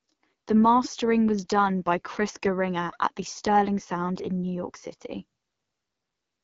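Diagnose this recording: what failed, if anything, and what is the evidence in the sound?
The codec stage is the culprit: the AMR wideband (HD Voice) codec runs through the whole speech clip. Nothing is heard above 7.3 kHz, and the speech has a rough, raspy grain. That fits a low rate near 8.85 kbit/s, where the pulse-driven model runs short of bits.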